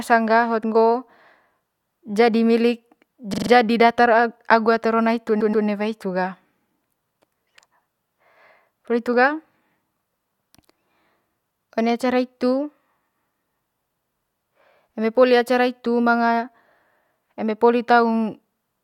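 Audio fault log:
3.33–3.50 s, repeated frames: a 43 ms block, about two compressed frames, was played four extra times, adding 0.17 s and producing a rapid stutter.
5.40–5.65 s, repeated frames: a 128 ms block, which fits about six frames, was played twice more, adding 0.26 s and producing a slower stutter.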